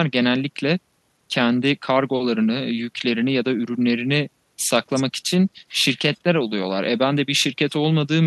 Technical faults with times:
none

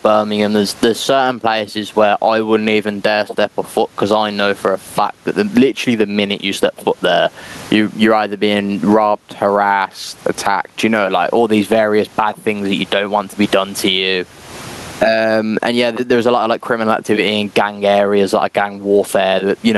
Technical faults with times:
0.00-19.77 gain pumping

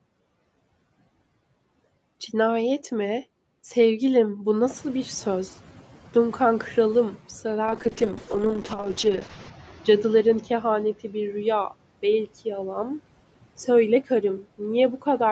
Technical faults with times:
4.62-7.16 noise suppressor catching up
7.66-13.07 call bitrate drop

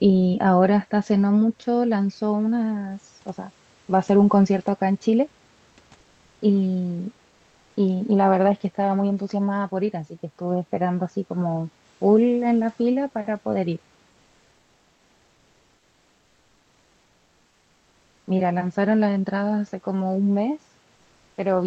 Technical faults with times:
5.69-5.77 comfort noise in place of the background

